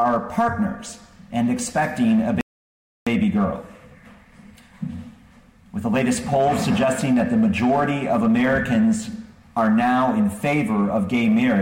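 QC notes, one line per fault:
2.41–3.07 s, rebuffering stall: the sound drops to silence for about 0.66 s and then picks up exactly where it stopped, so nothing is skipped and the clip simply runs longer by that gap. This sets it apart from a dropout or packet loss, where audio goes missing and the resumed sound jumps ahead. The player ran dry of downloaded data and waited for more before carrying on.
7.01–7.19 s, loud pop: two sharp pops in quick succession, peaking a little above the level of the surrounding sound, while the audio continues unbroken beneath them. Unlike a click from a dropped sample or a splice, nothing in the underlying sound is interrupted or shifted; the burst sits on top. A brief voltage step or pulse is likely the cause, such as a plug, switch, static discharge or driver glitch, shaped by the downstream circuitry into a thump.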